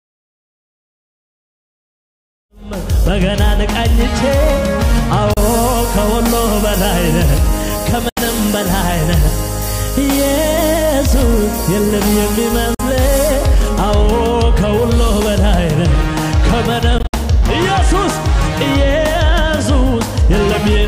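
After the fade-in ends near 3.1 s, silent gaps at 5.33, 8.09, 12.74 and a broken run over 16.98 to 17.14 s are likely Bluetooth dropout: late packets discarded, sound resuming as if it had played on.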